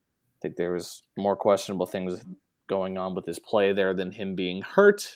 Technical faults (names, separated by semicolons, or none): none